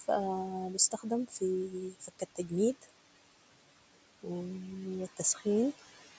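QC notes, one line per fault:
Throughout: noise suppressor artifacts. The steady room noise, sitting about 17 dB below the speech, is pulled down by about 18 dB in the gaps and comes back up under each phrase, so the background pumps with the talker. The suppressor decides band by band and frame by frame, so the leftover noise does not fall evenly. Nothing is heard above 8 kHz.
0.78–1.11 s, 1.9–2.52 s, 5.17–5.42 s: speech cut by the noise suppressor. In each span the suppressor takes low-level parts of the speech for background and turns them down with it, by up to about 14 dB, 15 dB and 11 dB respectively. The dips are brief: roughly a tenth of a second in total in the first and last spans, and around a third of a second in the middle one. The affected speech there sounds swallowed or faded rather than cleanly spoken.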